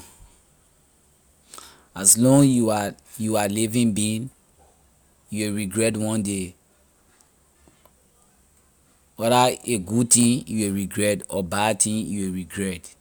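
Nothing is technically wrong with this speech recording; no faults can be heard anywhere in it.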